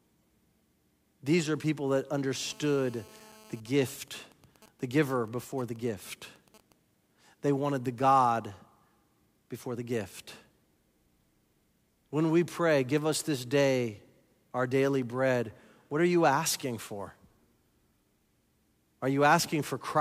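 GSM phone buzz runs from 2.45 to 3.60 s, starting just after "are people that". A 2G phone on a call nearby pulses its transmitter 217 times a second, and the audio circuit rectifies those pulses into a harsh, harmonic-rich 217 Hz rasp sitting about 26 dB below the speech.

GSM signalling bursts follow from 3.66 to 6.72 s. A nearby 2G phone, in a call but with its user silent, now sends only short groups of 217 Hz radio bursts. Once rectified, these come through at roughly 25 dB below the speech as even ticks with a longer buzz twice a second.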